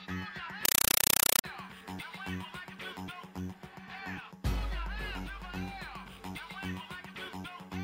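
From 0.65 to 1.44 s the sound gives way to very loud, chattering static: roughly 5.3 ms noise bursts repeating 31.25 times a second, with silence between. This is a compressed stream played as audio, an AC-3 bitstream, which fits 256 kbps, taken as PCM instead of decoded.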